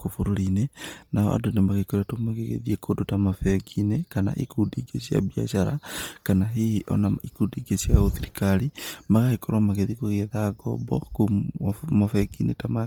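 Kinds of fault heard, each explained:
Bluetooth LC3 compression: Heavy transform-codec damage runs throughout this speech, giving a breathy, grainy edge where upper detail is replaced by noise fill, likely from LC3 at about 32 kbps with 10 ms frames; the band still reaches about 20.2 kHz.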